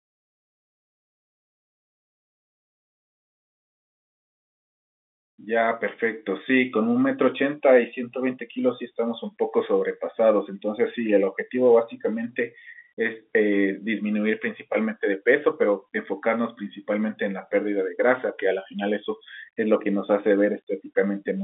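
No technical faults can be heard anywhere in this speech. It comes over a G.711 telephone line, so the sound sits in a narrow band of roughly 250 Hz to 3.6 kHz, with nothing above 3.8 kHz.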